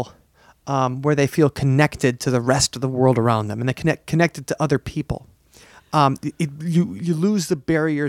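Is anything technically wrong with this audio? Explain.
No, nothing technically wrong can be heard in this speech clip. No fault is audible anywhere in it.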